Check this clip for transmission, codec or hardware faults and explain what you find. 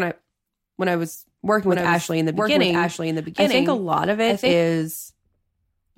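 One fault is present. A doubled audio track runs from 1.68 to 4.52 s, after "when I was working." A somewhat quieter copy trails about a second behind. It was likely caused by a second, slower capture path.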